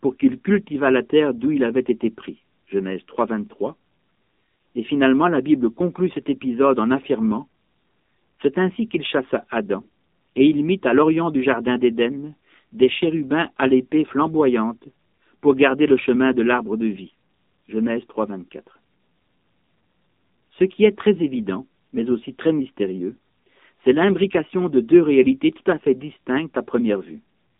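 AMR narrowband mobile codec damage runs through the entire speech clip. The sound is squeezed into a telephone band of roughly 150 Hz to 3.7 kHz, so nothing bright or airy survives and the low end is thin. The codec rebuilds the voice from a vocal-tract model excited by a handful of pulses per short subframe, and at this low rate, which fits the 7.4 kbps mode, that leaves a plainly audible buzzy, synthetic edge on the voice.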